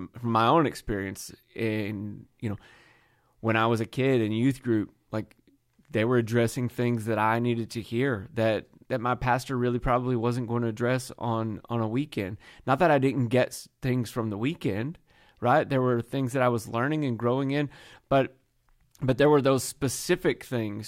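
No technical faults are audible.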